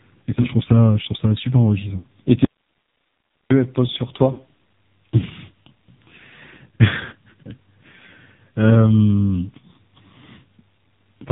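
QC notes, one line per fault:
throughout: AMR narrowband mobile codec. The speech is squeezed through an 8 kHz mobile vocal-tract model at a very low rate, consistent with the 5.9 kbps mode, so nothing above 4 kHz survives. The voice sounds heavily buzzy and synthetic, with a thin, boxy tone.
0.42–0.50, 1.98–2.08, 4.32–4.42, 7.06–7.13 s: lost AMR speech frames. The decoder misses speech frames and fills the gaps by repeating its last pitch and tract settings at falling gain. At 0.42 s there is a brief dip or warble of about 20 ms, which fits a single lost frame. The other three are runs of about 60 ms, which suggests three frames each. In those runs the sound smears and sags, right after "je trouve ça super" at 1.98 s and after "elles posent sur" at 4.32 s. The voice comes back rough for a moment.
2.45–3.50 s: audio dropout to a faint residue. This is likely a break in the signal feed while the downstream path stayed live. 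The sound cuts abruptly to hiss about 50 dB below the speech for roughly 1.06 s. It then snaps back in mid-flow just before "elles posent sur".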